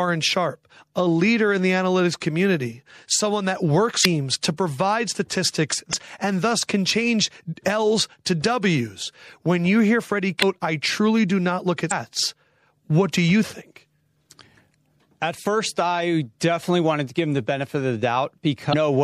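Throughout the speech, the audio carries plainly audible MP3 compression artefacts. The sibilants have a watery, swirling texture as weak frequency components drop in and out between frames. Onsets also sound smeared. This points to an encoder short of bits, likely running at around 64 kbps, so its hearing model discarded detail it judged less important.

Damaged data in the compressed stream produces five short disturbances, at 4.01, 5.89, 10.39, 11.88 and 18.69 s, each lasting about 40 ms. Each one is a brief chirp, squawk, click or short hole in the sound. At these points the decoder met corrupted frames it could not read correctly, lost sync, and jumped ahead to the next valid frame header before normal playback resumed.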